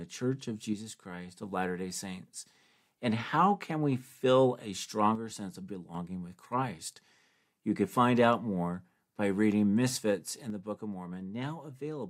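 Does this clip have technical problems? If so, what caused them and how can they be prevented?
Yes. One channel drops out from 0.73 to 1.43 s, from 5.15 to 5.95 s, and from 10.50 s to the end. Each time the speech abruptly falls by about 6 dB, recovering after the first two. The likely cause is one stereo channel going silent, so the mono sum keeps only the surviving side's half of the shared signal. Securing cables and connectors and watching both channel meters while recording would prevent it.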